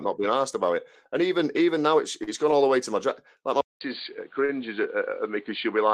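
A speech recording with two kinds of fault. First, a short stall from a late packet: twice a packet arrived late and the jitter buffer ran dry, so the receiver held the last sound until it came. At 2.23 to 2.30 s, between "even even now it's" and "gone all the way", about 37 ms is stretched, and at 4.45 to 4.52 s about 35 ms. Nothing is lost, but each spot sounds briefly frozen, with a slight buzz or dip. Second, from 3.61 s, right after "like my", the input was likely switched to a poorer device. After a 200 ms silence, the sound turns dull, with nothing above 4.6 kHz and a new noise floor about 35 dB under the speech. The level stays roughly the same through the end.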